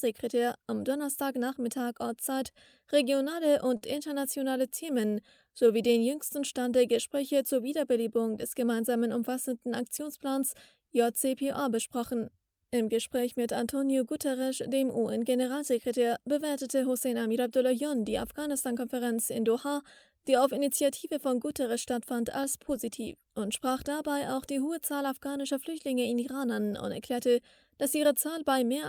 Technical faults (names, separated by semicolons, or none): short stall from a late packet; repeated stalls (stutter); jitter buffer slow-down; jitter buffer speed-up